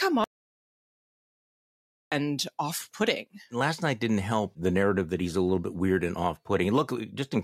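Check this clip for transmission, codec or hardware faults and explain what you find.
One fault stands out in the speech. From 0.24 to 2.12 s there is an audio dropout to silence: speech cuts off mid-flow, likely from a lost input, leaving 1.88 s of silence. The waveform is a flat line and the spectrogram is blank, with no room tone.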